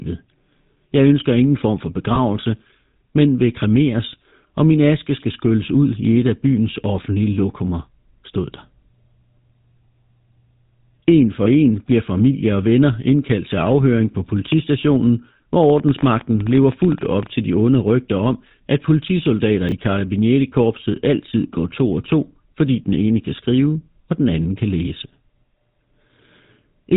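A buzzy, gravelly roughness colours the speech from start to finish, with nothing audible above 4 kHz. That is the GSM full-rate codec, whose damage is plainly audible here and fits its 13 kbps rate. It rebuilds the voice from a vocal-tract model excited by regularly spaced pulses, keeping only every third excitation sample, so the natural breathiness turns into coarse buzz and the top end is simply gone.

At 2.14 s, right after "ønsker ingen form for", the sound briefly freezes into a short rough, metallic ring, and the same thing happens again at 11.44 s, just before "en bliver familie og". These are lost GSM frames, one 20 ms frame each time. The decoder had no valid data for that slot, so it reused the last good frame's settings, holding the previous sound instead of leaving a gap.

At 19.69 s, just after "rygter om at politisoldater", there is a tiny garbled stumble. Here chunks are out of order: a 10 ms piece of audio arrived two chunks late and played after the material that should have followed it. 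Nothing is missing, but the sequence is scrambled, and this creates three hard joins around the jumbled moment.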